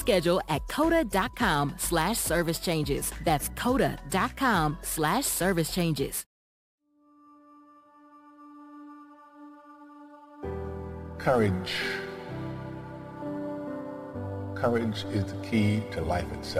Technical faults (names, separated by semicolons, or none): crude rate conversion